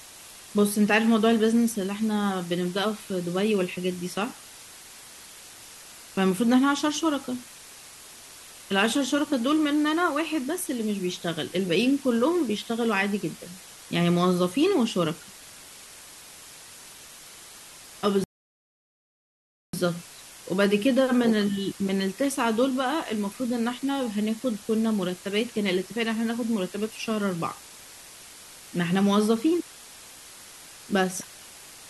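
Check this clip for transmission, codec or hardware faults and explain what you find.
Two faults turn up: a constant hiss from reduced resolution running through the whole clip, and one playback stall partway through.

Low bit depth with dither runs from start to finish. The speech has been squeezed down to just 6 bits, but dither was added before rounding. That turns what would otherwise be gritty quantisation distortion into a steady, even white hiss instead. The noise sits only around 20 dB below the speech, so it's pretty prominent. It's a flat, unchanging wash under everything, with no crunch or distortion on the speech itself.

There's a rebuffering stall from 18.24 s to 19.74 s. The player ran dry of downloaded audio and just waited for more to arrive. You hear the speech drop into silence for about 1.5 s, then pick up exactly where it left off. Nothing's missing from the speech, but that pause adds about 1.5 s to the running time.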